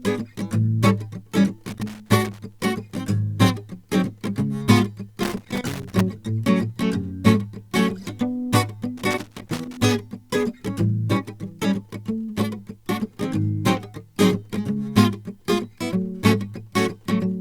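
Irregular bursts of scratchy crackle chop the music at 1.67–2.65 s, 5.23–6.01 s and 8.97–9.77 s: loose connector crackle, a dirty contact making and breaking.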